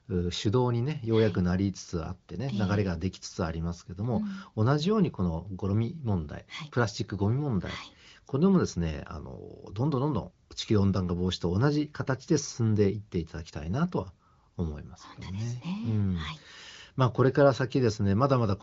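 Nothing stood out on listening to this speech, whose content stops near 7.3 kHz as expected of the AMR wideband (HD Voice) codec running at its 23.05 kbit/s rate.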